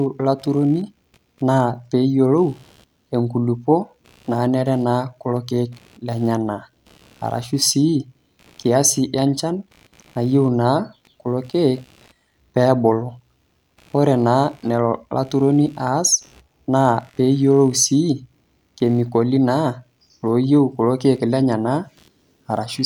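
Computer activity noise runs throughout the clip: a faint buzzing chirp pulsing at roughly 70 times a second, some 40 dB below the speech. Changing processor or graphics load shifts the shared ground under the audio circuit, so the buzz rises and falls with that activity, not with the speech.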